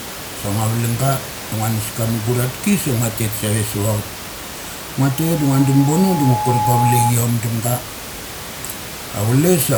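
At 5.11 s a loudspeaker feedback squeal begins. It is a single 843 Hz tone. The microphone is picking up the loudspeaker it feeds, so that frequency keeps looping and growing. It swells over about a second and a half to roughly 5 dB above the speech. It stops at 7.14 s.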